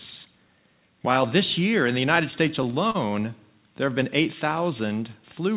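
From 2.16 to 2.96 s the sound drags and hitches, catching six times as brief fragments are held and stretched, the longest hold lasting about 40 ms. This is repeated stalls (stutter): packets arrived late, so the jitter buffer kept running dry and the receiver extended the last sound each time, filling 83 ms in all, about a tenth of that stretch. Nothing is lost, and the band-limited G.711 call audio stops at 4 kHz throughout.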